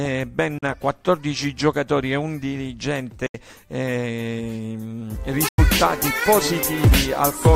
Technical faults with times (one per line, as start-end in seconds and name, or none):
0.58-0.63 Bluetooth dropout
3.26-3.35 Bluetooth dropout
5.48-5.59 Bluetooth dropout